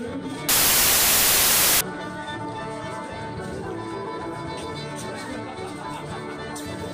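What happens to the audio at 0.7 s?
At 0.7 s the audio is buried in loud, harsh broadband noise. This is samples built from the wrong bytes, running from about 0.49 s to 1.81 s: each sample's bytes are misassembled, so rapidly fluctuating low-order bits dominate the values.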